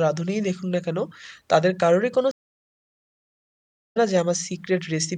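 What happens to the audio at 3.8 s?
At 3.8 s you're sitting inside a stream reconnect dropout, which runs from about 2.31 s to 3.97 s. The connection broke, the player went quiet for roughly 1.59 s, then reconnected and spun up a fresh decoder partway through the live stream. So when the speech comes back, it doesn't pick up where it stopped; it jumps ahead by around a second and a half, and that chunk is simply gone.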